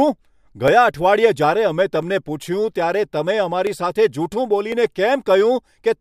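Dropped samples, heard as sharp single clicks in the speech at 0.68, 2.03, 3.67 and 4.72 s, likely occur where under a millisecond of audio went missing, so the waveform leaps straight to a later value and leaves a thin vertical line in the spectrum.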